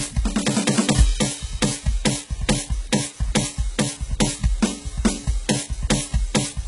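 Throughout the music, a coarse grain rides on every sound and thickens as passages get quieter, with quiet tails sputtering rather than fading smoothly. Low bit depth without dither is the likely cause: the rounding error sits only about 25 dB below the music, which fits a 6-bit signal.

Across the whole clip, the treble sounds synthetic and metallic, with cymbal-like detail turned gritty and nothing at all above 11.1 kHz. This is likely heavy HE-AAC compression, which fits a bitrate around 12 kbps, rebuilding the upper band by copying lower content upward.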